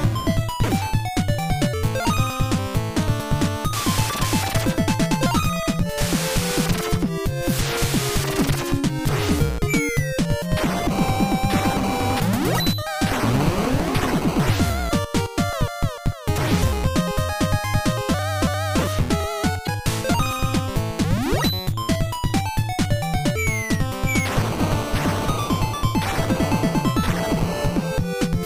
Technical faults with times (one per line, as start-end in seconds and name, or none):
19.63-19.69 damaged data in a compressed stream